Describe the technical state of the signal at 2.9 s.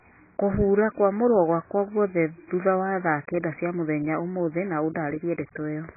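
At 2.9 s the speech sounds dull, smeared and warbly, with nothing above 2.5 kHz, as it does throughout. This is likely heavy AAC compression, whose bit-starved quantisation, suggesting a bitrate near 12 kbps, strips and blurs the spectrum.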